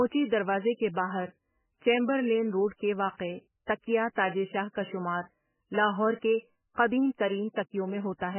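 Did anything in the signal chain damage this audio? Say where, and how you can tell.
Yes. The damage is most likely from MP3 compression at the codec stage, starved of bits to a degree that fits a bitrate near 9 kbps. It affects the whole clip. Nothing in the speech reaches above 3 kHz, because the encoder cut the treble at that point. Weak frequency lines drop in and out from frame to frame, so the speech sounds heavily watery and swirling, s sounds lose their hiss, and consonant onsets smear.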